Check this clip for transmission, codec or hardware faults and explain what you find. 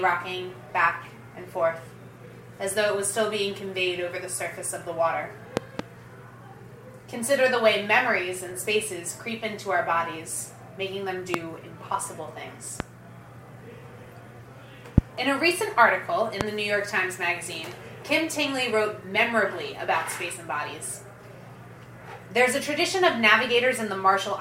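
There is one kind of fault, a loud pop, occurring five times. A double pop is heard at 5.57–5.82 s, then single pops at 11.34–11.37, 12.80–12.82, 14.98–15.00 and 16.41–16.43 s. Each is a sharp thump about 20 to 25 dB above the sound, which continues underneath. The likely cause is a sudden voltage step or pulse from a switch, plug, static or driver glitch, shaped by the circuitry that follows it.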